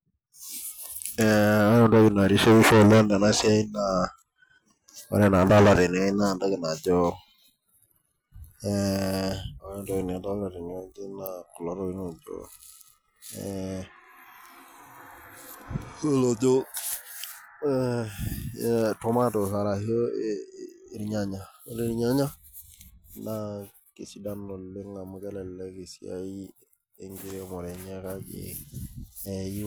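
No faults detected anywhere in the speech recording.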